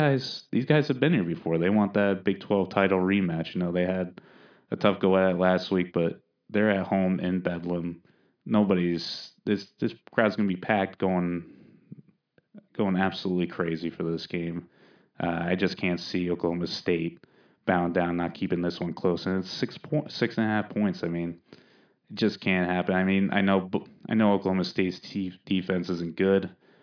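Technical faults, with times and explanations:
No technical faults are present in this clip.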